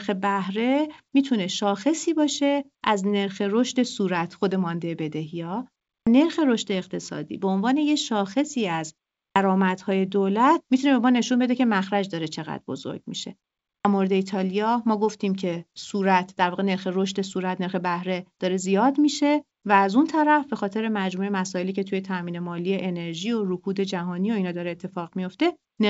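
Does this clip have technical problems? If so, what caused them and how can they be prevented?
Yes. Clipped start after a pause occurs at 5.95, 9.24 and 13.72 s. After silences of 0.3 to 0.4 s, the output device has gone idle and needs time to wake, so the first 116 to 128 ms of sound is swallowed and each phrase begins abruptly. Muted pauses only drop the background during gaps, but this fault cuts off the speech itself. Keeping the output stream active through silence, or disabling the device's power-saving idle mode, prevents it.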